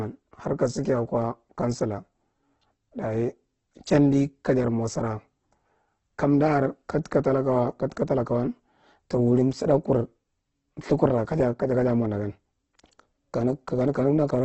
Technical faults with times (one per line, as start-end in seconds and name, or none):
0.00-14.45 Opus compression